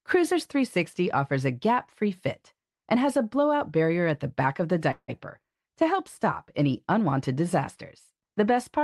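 Packets were likely held up in transit, draining the jitter buffer and causing a call audio freeze from 4.91 to 5.10 s. The last sound stretches into a fading fill of about 0.17 s, plus 50 ms of silence. Speech then resumes where it stopped, nothing lost.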